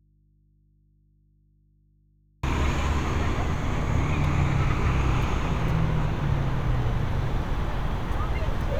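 An everyday-sound recording that opens already in an audio dropout to a faint residue: from the start until 2.43 s the wanted sound is absent and only a low mains hum sits in its place, roughly 40 dB below the signal's normal level, before the sound cuts in abruptly rather than fading up. The likely cause is a break in the source feeding a path that stayed live, leaving the open input to pick up hum.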